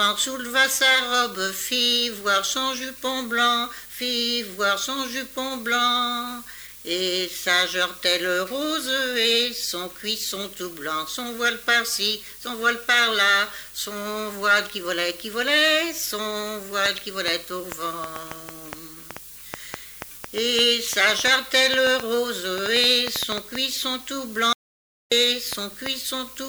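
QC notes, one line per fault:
16.86–25.87 s, train of clicks: around forty sharp ticks at an irregular pace of about 4 per second, roughly 15 dB above the sound, likely interference or a faulty connection.
24.53–25.12 s, audio dropout to silence: the sound cuts to silence for 0.59 s with no room tone, likely a lost input link while recording continued.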